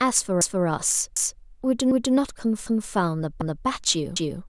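The audio was handled in 0.5-second chunks that overlap, so each new chunk starts before the previous one has finished. At every join, 250 ms of speech plays a second time. The fault is audible as overlapping chunks at 0.41, 1.16, 1.91, 2.66, 3.41 and 4.16 seconds, each lasting a quarter second. The result is a regular stutter every 0.75 seconds.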